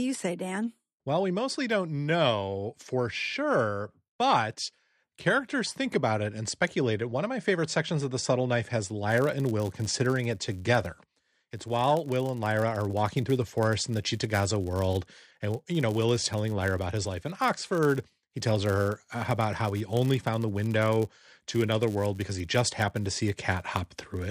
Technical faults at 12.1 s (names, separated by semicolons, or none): filter restarted on every block